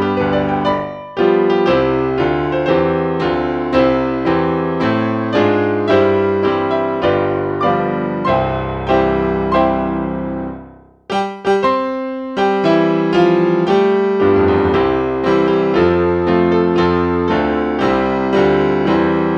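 No technical faults can be heard anywhere in the recording.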